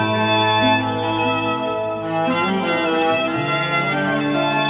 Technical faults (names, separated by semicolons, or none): none